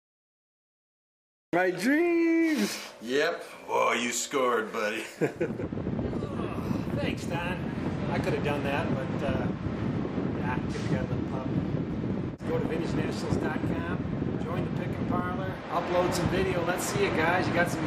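From 0.00 to 1.53 s there is only digital silence, and at 1.53 s the audio arrives already in progress. This is a cut-off start: capture began late, so the sound is joined mid-event with no attack or gradual rise. What sets it apart from a fade-in or a quiet lead-in is that the jump from dead silence to full level is instantaneous, and the opening of the sound itself is missing.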